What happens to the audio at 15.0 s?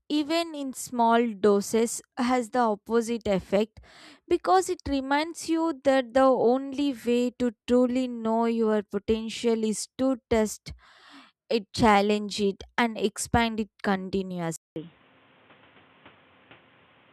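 At 15.0 s the recording is inside a stretch from 14.56 s to the end where the input was likely switched to a poorer device. After a silence of 200 ms at 14.56 s, the sound returns dull and boxy, with nothing above 3.8 kHz, roughly 5 dB quieter, and with a new noise floor only about 30 dB down. A spectrogram shows a hard ceiling at 3.8 kHz; the waveform shows a flat gap, then smaller peaks over background noise.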